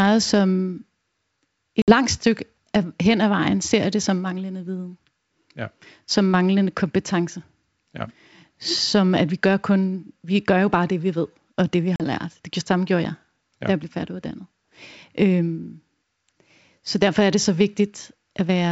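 At 1.82 s and again at 11.96 s, packet loss on an ADPCM call cuts hard-edged silent holes of about 60 ms and 40 ms. Sound resumes with slight, brief distortion while the decoder's predictor resynchronises, unlike a clean dropout.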